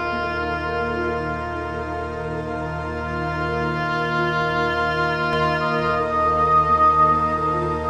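A doubled audio track appears at 5.33 s and runs to the end: a second, equally loud full-band copy trails the original by roughly 0.4 s, cutting in abruptly with no decay or room colour, likely from a slower second capture path.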